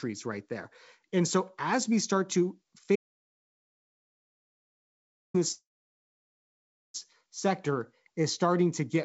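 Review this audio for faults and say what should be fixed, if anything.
The input was likely lost between 2.96 and 5.34 s, through a disconnected device, failed link or stray mute, while the recorder kept writing silence. Right after "as we start to", the speech cuts to dead silence with no room tone, and about 2.4 s of it is gone.

Packets were likely held up in transit between 5.52 and 6.96 s, so the jitter buffer ran dry. The receiver stretched the last sound briefly, then left about 1.3 s of silence. Speech resumes where it stopped, with roughly 1.4 s of gap added and nothing lost.

Secure the input connection and monitor the source level during recording, and give the call path a larger adaptive jitter buffer on a steadier network, keeping in mind that this G.722 route already carries nothing above 8 kHz.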